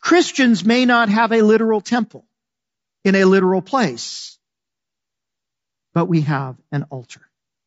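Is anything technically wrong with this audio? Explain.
Yes, there's low-delay AAC compression damage throughout the speech, and it's plainly audible. The voice comes out rough and grainy, with noise between the harmonics and a thin, artificial-sounding top end. That's likely AAC-ELD's short frames smearing pitch detail, which fits a bitrate around 32 kbps.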